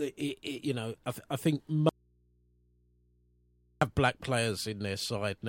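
It's a short speech clip, and right after "I think" at 1.89 s the audio drops out to a faint residue. For about 1.9 seconds, until 3.81 s, all that's left is a low mains hum sitting roughly 40 dB below the speech, and then the signal snaps straight back. That hard cut with a live path underneath points to a likely break in the connection upstream while the input stayed open and picked up hum.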